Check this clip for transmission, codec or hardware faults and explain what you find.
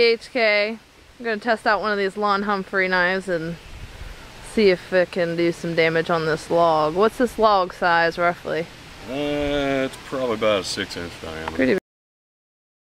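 There's one fault here: a cut-off end. At 11.78 s the audio stops dead in the middle of a sound and stays silent for the last 1.02 s. What's going on is that the final buffers never got written out or played, so whatever was sounding just gets chopped rather than finishing. You hear no decay or tail at all. It's an abrupt drop straight to silence right where the sound should still be going.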